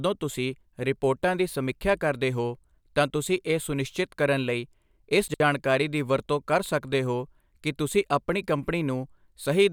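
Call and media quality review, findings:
Chunks out of order at 5.28–5.40 s. Probable jitter buffer or playout writer; one 60 ms chunk delivered late, played one chunk after its successor. No speech lost, but the order is swapped. Three hard joins leave a jumbled, garbled blip in the speech.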